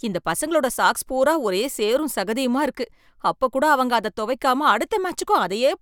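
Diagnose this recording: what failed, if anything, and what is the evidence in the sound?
No fault heard anywhere.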